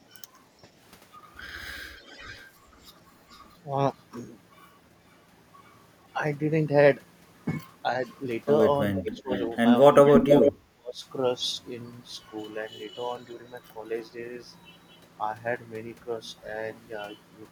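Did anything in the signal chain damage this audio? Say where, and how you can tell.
Yes. The call processing likely let some far-end loudspeaker sound past an echo canceller, producing echo leak. Delayed copies of the speech appear at 1.96–2.46 s, 8.05–8.13 s, 8.97–9.56 s and 10.05–10.52 s, each trailing the original by a consistent 436 ms. That fixed delay marks them as echo rather than a second talker. The leak grows worse over the clip, from faint scraps about 30 to 35 dB down to roughly 20 dB down, and by 10.05 s it is about as loud as the speech itself.

The same call processing also shows speech suppressed in double talk, likely because the echo canceller could not tell the local talker from the returning echo and turned the whole signal down. At 9.03–9.31 s, inside the echo stretch, the speech level dips by around 20 dB for about 200 ms. At 10.74–11.05 s, just after the loudest echo, it falls by roughly 35 dB for about 300 ms, which is close to a dropout.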